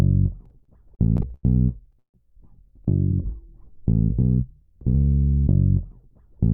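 Between 0.45 and 1.45 s the audio shows repeated stalls (stutter). Ten short hitches break up that second, each one holding the last sound in place for a moment before playback resumes. The longest is about 90 ms, and together they fill 240 ms, roughly a quarter of the span. Nothing is dropped, so the passage drags and jerks rather than skipping. Packets were arriving late or slower than playback, letting the jitter buffer drain again and again.

At 1.99 s there is a call audio freeze lasting until 2.16 s. The sound hangs briefly, then falls away to silence for about 110 ms of the 151 ms gap, and resumes exactly where it stopped, with nothing missing. The cause is likely a batch of packets held up in transit, emptying the jitter buffer. The receiver bridged the wait with a fading continuation and then picked up again once the delayed packets arrived.

From 2.76 to 4.86 s a jitter buffer slow-down stretches the audio. 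The receiver repeated single pitch periods and fragments of pauses to rebuild its reserve, adding 109 ms over about 2.1 s. That runs the passage at 95% speed with pitch unchanged, so sounds are slightly drawn out. The buffer was running low, or had just raised its target delay.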